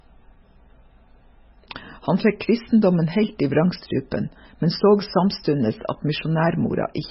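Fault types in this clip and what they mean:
MP3 compression: The audio was likely squeezed through an MP3 encoder starved of bits, which fits a very low bitrate around 16 kbps. To save data it discarded everything above 5.5 kHz and zeroed out weaker frequency components, letting them flicker on and off between frames. Throughout the speech this heavy damage leaves a dull, band-limited tone with a watery, swirling texture, and sharp onsets sound smeared rather than crisp.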